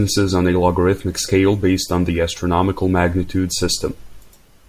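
No technical faults can be heard anywhere in this speech recording.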